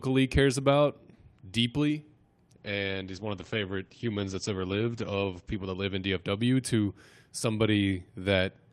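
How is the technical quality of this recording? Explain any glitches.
The quality drops partway through. From 2.56 to 6.27 s there is a call bitrate drop. The encoder gets far fewer bits, consistent with roughly 48 falling to 12 kbps. Coding turns coarse, and the top end closes from 20 kHz to 8 kHz. The speech sounds muffled and rough, worst for about 3.1 s.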